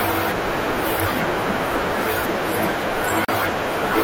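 Separately encoded pieces were joined untrimmed: a gap at a join of encoded pieces silences the speech for 36 ms at 3.25 s, then it resumes.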